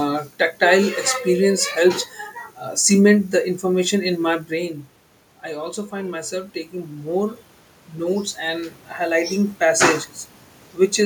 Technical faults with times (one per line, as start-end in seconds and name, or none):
5.44-9.61 automatic gain rising